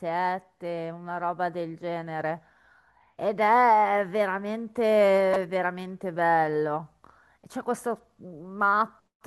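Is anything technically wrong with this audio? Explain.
Yes. At 5.33 to 5.37 s, corrupt frame decoded: flipped bits in a handful of compressed frames were decoded anyway, putting a brief chirp or noise burst peaking around -15 dBFS into the speech.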